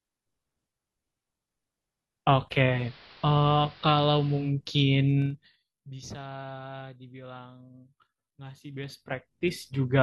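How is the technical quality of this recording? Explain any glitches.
The recording has two kinds of glitch: one radio blend and two stretches of zipper noise.

From 2.68 s to 4.54 s there is digital radio blending to analogue. The receiver lost its digital stream and cross-faded to the station's AM broadcast over about 0.19 s, then returned. Hiss rises to around 20 dB below the signal. The level also drops by about 2 dB.

Zipper noise appears from 5.20 s to 5.64 s and again from 8.60 s to 9.60 s. Each time the level moves in unsmoothed 2 dB steps instead of a continuous ramp. Every step puts a small click into the waveform. The first run falls roughly 20 dB at about twenty steps a second, giving a fast zip. The second rises roughly 20 dB at about ten steps a second, so the ticks are slower and more distinct.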